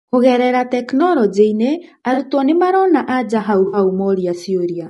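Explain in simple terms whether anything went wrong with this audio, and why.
The whole clip of speech has a rough, grainy edge, with a hiss tucked between the pitch of the voice and a thin, slightly artificial top end. That's most likely low-delay AAC compression, the kind video calls use, where very short frames can't capture voice detail cleanly.

There are also two brief hiccups from AAC frame loss with concealment: around 2.13 to 2.18 s (about 40 ms missing) and 3.67 to 3.77 s (about 60 ms). The decoder patched each gap by reusing the last good sound, so you hear short smeared, noisy blips.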